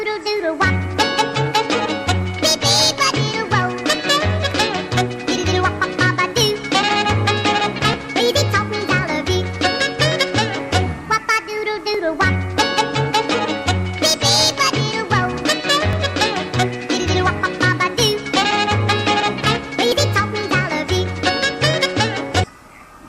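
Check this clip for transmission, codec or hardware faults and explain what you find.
One fault recurs here: overlap between stream segments, heard at 11.95 s, 15.93 s and 19.92 s. Overlapping 4-second segment timestamps make the player trim audio that was never duplicated, so roughly 15 to 18 ms vanish each time, producing a small click or skip at 4-second intervals.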